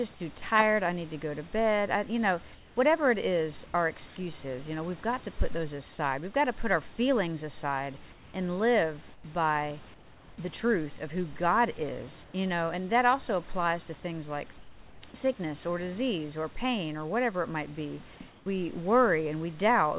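At 0.38–0.42 s a tiny slice of speech is replaced by flat noise, likely sound dropped by the voice detector. The waveform shows a brief even patch where speech energy should be. Comfort noise in place of the background then appears at 2.54–4.16, 8.12–10.38 and 12.24–12.34 s, just before "know and that also", and at 14.58–15.14 s. In these pauses the real room noise is likely swapped for steady synthetic noise, about 2 dB quieter at 12.24 s. On a spectrogram the fill is a smooth, featureless band below 4 kHz. At 15.12–15.14 s, between "applies to things like" and "sickness or disease or", the voice detector likely again cuts a brief bit of sound to noise. A final comfort-noise stretch follows at 18.30–18.46 s after "whatever it might be", also about 2 dB down.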